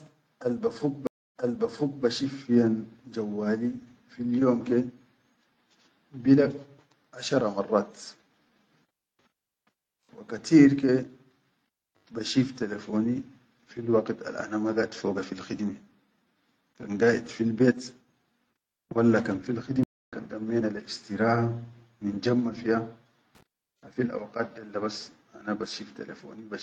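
At 1.07 s the speech drops into a stream reconnect. The connection broke, the player fell silent for 0.28 s, then reconnected and started a fresh decoder. It resumes 0.70 s earlier than where it stopped, because the server resent a burst, so a short stretch is heard twice, and the restart fades in by about 2.05 s. A dropout would lose audio without jumping, and a buffer underrun would continue from the same point.

A second stream reconnect at 19.83 s brings another 0.28 s silence. This time the sound resumes roughly 0.3 s later, so material is skipped rather than repeated, and it has recovered by 20.13 s.

From 23.35 to 23.43 s, loose connector crackle appears as a brief, irregular burst of scratchy crackle. A worn or dirty contact is rapidly making and breaking, chopping the signal. Unlike the reconnects, it leaves no clean gap and no jump in the sound's position.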